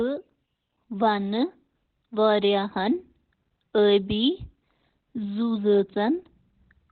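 A speech clip with Opus compression throughout: nothing sounds above about 4.3 kHz, and the sound is muffled and hoarse rather than swirling with the watery holes of MP3. That points to heavy damage, likely from Opus's narrowband SILK speech mode at a rate around 12 kbps.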